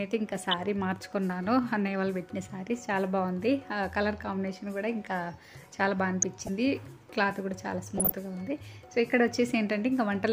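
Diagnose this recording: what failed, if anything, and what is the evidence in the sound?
The failure is at the reception and codec stage. Weak DAB reception let bit errors slip past error correction into the MP2 audio data, causing DAB burbling at 0.37–0.54 s, 6.22–6.49 s and 7.97–8.12 s. Corrupted samples put short blips of noise into single sub-bands, and corrupted scale factors make sub-bands jump in level for up to a frame. The bursts come from an error rate well under one percent.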